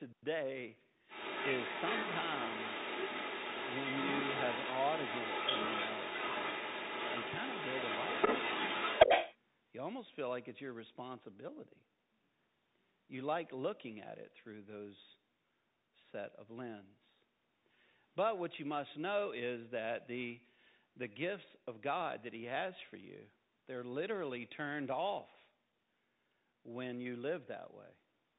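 Speech heard through a Bluetooth CVSD headset codec: nothing above 3.8 kHz survives, sibilants turn scratchy and a granular hiss sits underneath, which sets it apart from a clean band limit and fits a 64 kbit/s CVSD link. From 1.08 to 9.37 s, the other side's voice leaks through at about the same level as the talker, most likely loudspeaker echo the canceller missed rather than an unrelated background voice.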